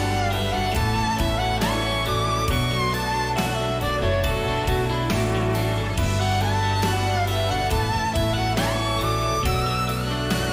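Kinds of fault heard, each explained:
No technical faults can be heard anywhere in the signal.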